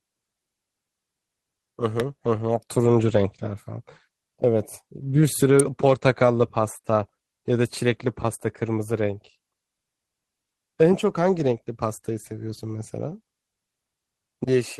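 Speech carries two electrical switching spikes, sharp snaps at 2.00 s and 5.60 s laid over the sound, likely from a nearby switch or motor arcing into the line. Each shows as a near-vertical full-band stripe on a spectrogram and a narrow spike on the waveform.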